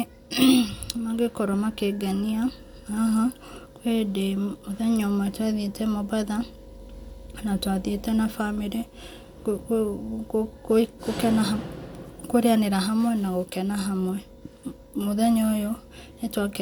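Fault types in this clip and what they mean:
Nothing stood out on listening to this speech clip.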